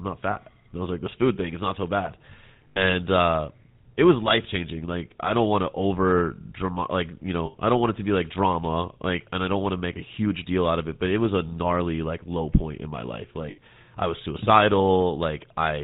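GSM full-rate codec damage runs through the whole recording. The codec models the vocal tract as a filter and feeds it a coarse pulse train in which only every third excitation sample survives, so the finer structure of the speech is rebuilt from a thinned-out signal. The result is a plainly audible buzzy, gravelly roughness, with nothing above 4 kHz. The dull top end and grain point to the 13 kbps full-rate coder.

Lost GSM frames appear four times: at 0.32 to 0.37 s, lasting 40 ms, which fits two 20 ms frames, and at 2.68 to 2.83 s, 7.46 to 7.56 s and 13.5 to 13.59 s. The last three each last about 80 ms, consistent with four frames. At each point the decoder had no valid data and reused the last good frame's settings. The speech briefly freezes into a rough, metallic ring before normal sound returns.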